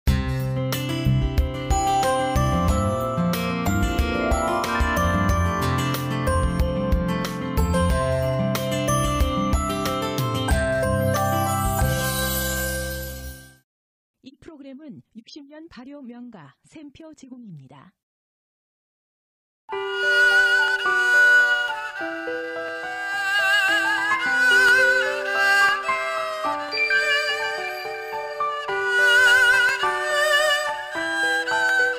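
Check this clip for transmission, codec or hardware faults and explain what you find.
Nothing stood out on listening to this recording.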